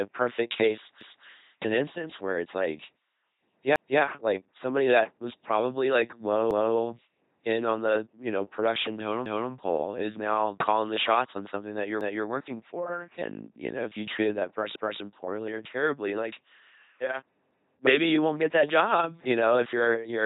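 Throughout, the speech carries the buzzing, mechanical timbre of an LPC-10 vocoder at 2.4 kbit/s. Each instant is rebuilt from either a pulse train or noise through a short all-pole filter. On a spectrogram there are uniform pulse striations or flat hiss and nothing above 3.8 kHz.

Overlapping chunks repeat 250 ms of audio at 1.01 s (between "a perfect case" and "an instance where it's"), 3.76 s (before "like somebody that was"), 6.51, 9.26, 12.01, 14.76 and 17.51 s (between "or terribly like yeah" and "maybe you won't get"). The stutters recur regularly, fitting 2.5 s chunks. The waveform shows duplicated segments with abrupt joins.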